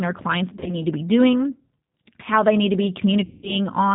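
Throughout, the G.729 codec at 8 kbit/s leaves plainly audible roughness and a synthetic edge, and the spectrogram shows nothing above 4 kHz. From 0.50 to 0.75 s, after "their clients" and before "to be doing", VoIP packet loss concealed by the speech codec stretches short gaps into buzzy, fading fragments. About 80 ms is missing, scattered over 160 ms in runs of no more than 20 ms. At 3.25 to 3.55 s, after "they need to be", about 180 ms is missing. The sound smears into a decaying tone whose waveform envelope sags and whose harmonics blur on the spectrogram.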